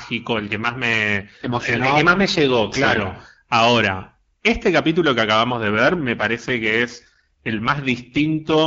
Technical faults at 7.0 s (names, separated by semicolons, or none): AMR rate drop